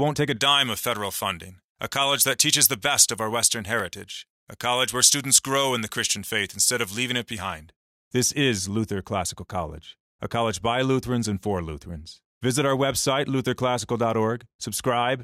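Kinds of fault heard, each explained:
Pre-emphasis left on: The treble lift applied for recording or transmission was never undone, so from 0.37 s, just after "take a", until 7.69 s the speech sounds thin, bright and hissy on sibilants. The boost is about 11 dB at 10 kHz relative to 1 kHz, which fits a J.17 curve. On a spectrogram that stretch shows an overbright upper band. The waveform looks spikier there.
Block of digital silence: At 3.80 s a tiny run of samples, about 0.73 ms and consistent with a 32-sample block, drops to silence and returns without any fade. At this length it is heard as a brief tick rather than a hole. On the waveform it appears as a flat line at zero with abrupt edges. The spectrogram shows a thin vertical broadband stripe at the gap.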